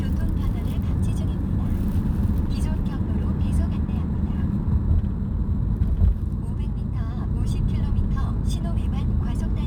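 Throughout, crude rate conversion is at work: samples were repeated without filtering, which fits a 44.1 kHz to 48 kHz change. The regular stepping error, around 40 dB below the signal, adds unrelated tones heard as a faint gritty fizz trailing loud and bright sounds.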